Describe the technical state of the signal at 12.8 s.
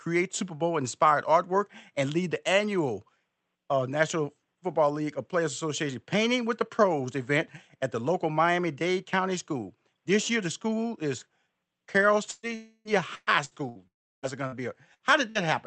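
At 12.8 s the signal sits inside a long network dropout, running from 12.55 to 12.88 s. The sound freezes into a fading buzz or hiss that is continued from the last audio for about 0.3 s, then drops to a short silence before 12.88 s, likely because no packets arrived. On a spectrogram this appears as smeared, stationary horizontal bands that dim into a blank strip; the waveform shows a decaying repetitive pattern ending in flat line.

This dropout falls within a wider stretch of repeated packet loss (robotic sound), from 12.31 to 15.43 s, where seven gaps, the longest 118 ms, are patched by extending the previous sound. The result is choppy, with pieces missing. A spectrogram shows recurring smeared blocks and breaks, all within the Opus call path's 8 kHz band.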